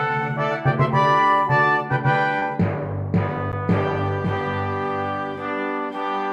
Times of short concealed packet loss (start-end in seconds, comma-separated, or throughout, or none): 2.39-2.43